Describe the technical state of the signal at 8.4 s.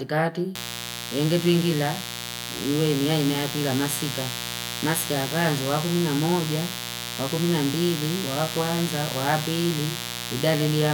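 At 8.4 s the speech is sitting on top of mains buzz, which runs from 0.55 s to the end of the clip at about 11 s. Interference tied to the 60 Hz supply is getting into the signal path as sharp spikes twice per mains cycle, so it carries a dense stack of 60 Hz harmonics reaching up into the kilohertz range. The result is a steady, raspy buzz, sitting roughly 10 dB below the speech itself.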